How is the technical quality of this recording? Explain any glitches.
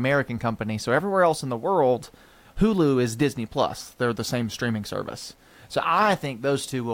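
The recording is clean in level but marred by quantisation grit through its whole length. From start to finish, quiet passages of the speech turn grainy, and decaying sounds sputter into silence. This is likely low bit depth without dither, with rounding to roughly 9 bits, leaving error about 40 dB below the signal. Because the grit tracks the speech and vanishes in pauses, it differs from dithered low bit depth or added noise, which would leave a steady hiss.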